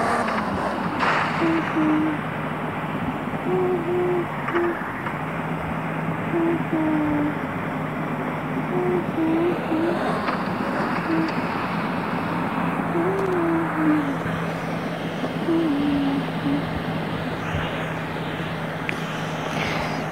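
At 13.18 to 13.34 s, a burst of loose connector crackle lasts about 0.16 s: a worn contact rapidly makes and breaks, chopping the signal into irregular scratchy pops. Its ragged, uneven texture sets it apart from a single clean digital click or a tidy dropout.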